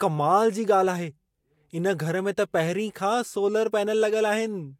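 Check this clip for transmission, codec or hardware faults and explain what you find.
Nothing here points to any transmission, codec or hardware trouble; the speech comes through steady and intact, with nothing to flag.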